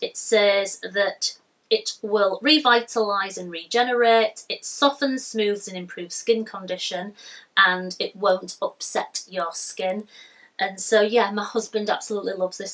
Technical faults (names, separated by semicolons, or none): resampler restarted on every block